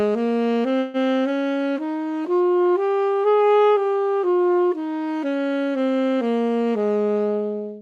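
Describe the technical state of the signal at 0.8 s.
At 0.8 s a call audio freeze runs from 0.79 to 0.97 s. The last sound is stretched into a fading buzz for about 145 ms, likely because delayed packets emptied the jitter buffer. Nothing is lost, and playback resumes 145 ms late.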